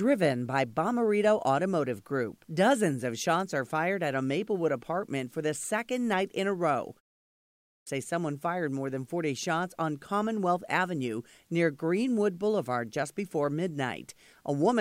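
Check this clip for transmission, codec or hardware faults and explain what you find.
One fault shows up, a clipped start after a pause. From 7.29 to 7.87 s, after a 0.37 s silence, about 0.58 s of speech is missing. The output device dropped into a low-power state during the gap and took that long to wake, so the phrase bursts in abruptly without its opening sounds.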